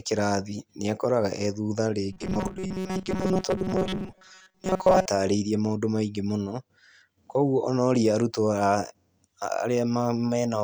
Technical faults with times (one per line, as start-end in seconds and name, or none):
2.13-5.07 robotic sound from repeated short buffers